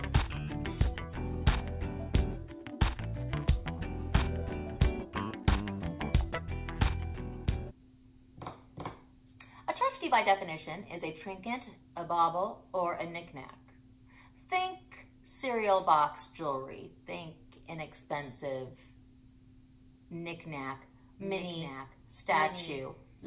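From 21.2 s to the end, a doubled audio track appears. A second full-band copy trails the original by about a second, a few dB quieter, with no room colour. It starts abruptly. The likely cause is a slower second capture path. Everything is band-limited near 4 kHz, which fits a G.711 call path.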